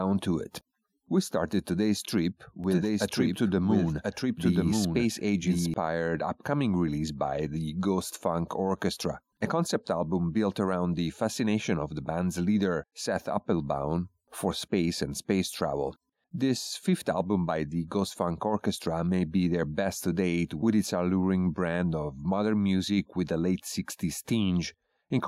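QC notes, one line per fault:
2.64–5.74 s, doubled audio track: a second copy of the speech, likely picked up again by a slower capture path, is mixed in about a second behind the original and at roughly the same level, so just after "started today's trip" each phrase is heard twice over itself until "upcoming release by the". The trailing copy is full-band and dry, with no decay or room colour, and it cuts in and out abruptly at both ends.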